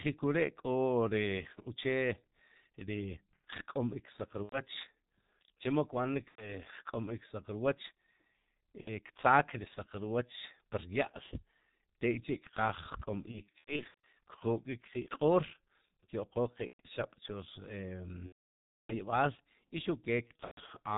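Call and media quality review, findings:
G.723.1 codec, whole clip: muffled, hoarse speech, nothing up top past 4 kHz, consonants smeared. Heavy damage, and the sound fits the low 6.3 kbit/s mode. Slow 30 ms frame-based voice model can't keep up with fast articulation.

VoIP packet loss concealed by the speech codec: buzzy or noisy stretched fades at 4.43–4.61 s, 6.29–6.50 s (right after "chemo kb'anik"), 8.81–8.90 s (just before "ktzaak ri saq rwoch"), and 16.67–16.80 s. Each is roughly 60–120 ms gone, about two to four frames. Decoder extrapolates last pitch/filter, gain ramps down.

Worse stretches: 13.22–13.94 s, scattered gaps, runs up to 90 ms; 18.27–18.95 s, one long ~630 ms hole, brief fade then muted to silence; 20.27–20.71 s, scattered, runs up to 120 ms. Voice stays weak briefly after recovery.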